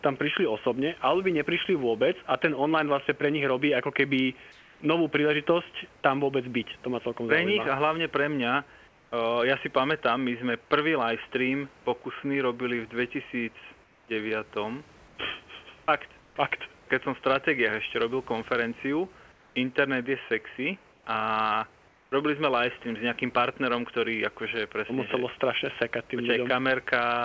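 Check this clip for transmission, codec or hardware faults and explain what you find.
The pauses in this speech show comfort noise in place of the background. It occurs at 4.52, 8.88, 13.84, 15.08, 16.20, 19.32, 20.92 and 21.88 s, for example between "a hlavne pre mňa" and "ja si pamätám my". Each gap lasts 80 to 280 ms. The likely cause is discontinuous transmission. The sender stops sending during silence, and the receiver fills the gap with synthetic noise. The real room hiss is replaced by a flat, featureless noise, mostly about 2 to 3 dB quieter.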